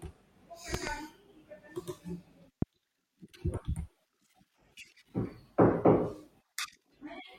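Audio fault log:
0.74–0.90 s, loud pop: A sudden voltage step, likely from a plug, switch, static discharge or driver glitch, entered the signal path twice in quick succession. It is heard as a double pop peaking about 15 dB above the speech, with the speech continuing underneath.
2.62–2.65 s, loud pop: A single brief voltage pulse, likely from the same kind of electrical disturbance, produced one sharp pop, again about 15 dB above the speech, which carries on beneath it.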